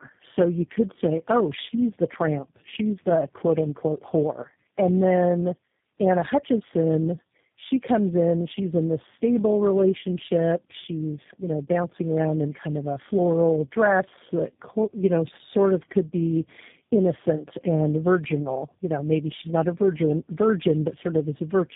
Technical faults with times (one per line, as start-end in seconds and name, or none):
0.00-21.76 tandem speech coding